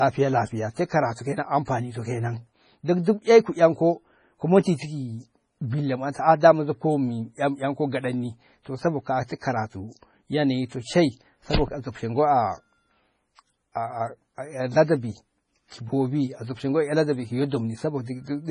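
Speech, heavily damaged by what is most likely MP3 compression at a starved bitrate; the bandwidth stops dead at 10.5 kHz, which fits a rate near 24 kbps. With bits that scarce, weak frequency lines drop in and out between frames, giving a watery, swirling texture, metallic chirping on s sounds, and smeared consonant onsets. A pre-echo runs from 6.12 to 6.15 s. The codec spread its quantisation noise across a whole transform block, so a short hiss leaks about 28 ms ahead of a sharp attack and softens its edge.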